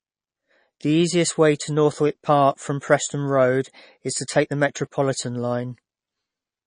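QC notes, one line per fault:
Throughout, MP3 compression: the treble stops dead at about 9.8 kHz, so the speech sounds dull and boxed-in, and there's a watery, swirly shimmer on the s sounds with smeared attack on consonants. That's likely a starved MP3 encode, one that chops off the top band and lets weak frequency lines flicker on and off frame to frame. The damage is plainly audible, which fits a low bitrate around 32 kbps.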